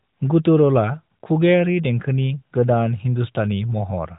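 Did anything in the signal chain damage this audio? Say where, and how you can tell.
No, nothing in the chain damaged this speech; the only audible trace of the path is the AMR narrowband mobile codec, which leaves nothing above 3.8 kHz, with light coding texture that fits its top 12.2 kbps mode working as designed.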